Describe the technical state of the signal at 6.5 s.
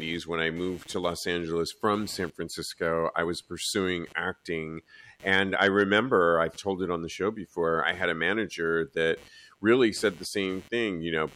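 At 6.5 s a faint buzzing chirp sits under the speech, pulsing at around 150 Hz and about 30 dB below it. It rises and falls with its own rhythm, not with the talking, and it runs through the whole clip rather than starting there. This is computer activity noise: shifting load in the processor, graphics hardware or mouse modulates the ground shared with the audio circuitry, and those current swings leak into the signal.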